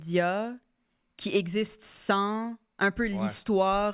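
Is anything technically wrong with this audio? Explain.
No, the speech signal comes through intact, with nothing in its technical state that stands out as a problem.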